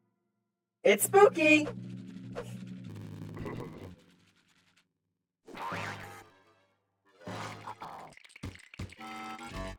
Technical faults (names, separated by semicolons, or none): block size mismatch (padded)